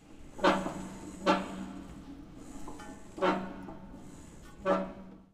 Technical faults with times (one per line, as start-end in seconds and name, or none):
none